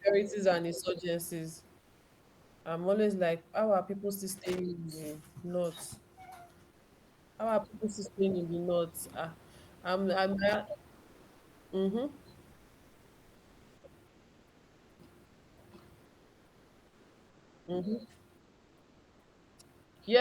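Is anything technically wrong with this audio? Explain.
Yes. Comfort noise in place of the background appears in the speech pauses at 1.79–2.65 s (just before "I'm always like how"), 6.71–7.37, 10.95–11.71, 12.53–14.99, 15.25–15.57, 16.05–17.67, 18.37–19.57 and 19.83–19.95 s. The real room noise, about 30 dB below the speech, gives way to steady, featureless hiss about 2 dB quieter, likely from discontinuous transmission in a codec such as Opus. The constancy, not any drop, separates it from genuine room ambience.

Loose connector crackle occurs at 4.37–4.59 s, after "how are people still", and at 10.49–10.57 s, after "I'm I'm". A contact making and breaking chops the signal into irregular scratchy bursts, unlike a single clean click.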